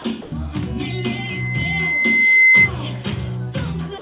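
From 0.22 to 0.32 s, the background turns into a steady, featureless hiss for about 100 ms, at the same level as before. This is likely comfort noise in place of the background: the sender paused transmission during quiet and the receiver filled the gap with synthetic noise.

From 0.83 to 2.71 s, a single tone at 2.1 kHz swells over roughly a second and a half until it stands well above the rest of the sound. This is a loudspeaker feedback squeal, where a microphone picks up its own loudspeaker and the loop gain exceeds one at that frequency. The tone sits inside the call path's band, which carries nothing above 4 kHz.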